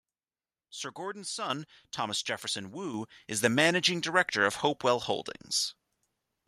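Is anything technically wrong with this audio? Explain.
Yes. The microphone volume is stepped up twice, at 1.5 s by about 7 dB and at 2.94 s by about 6 dB. Software judged the input too quiet and raised the device gain in single jumps. Speech and background rise together instantly, unlike a talker leaning closer, which lifts only the voice.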